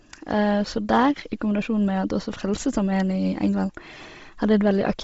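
Throughout the speech, the audio was likely squeezed through Bluetooth LC3 compression at a low bitrate, which fits 24 kbps in 7.5 ms frames. Upper-band detail is replaced by noise fill, leaving a heavily grainy, breathy edge, with nothing above 7.7 kHz.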